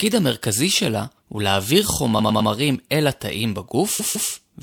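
Repeated frames at 2.18 s and 3.99 s: a compressed block, 104.5 ms then 156.7 ms long, is decoded three and then two extra times, stuttering and adding 313.5 ms each time.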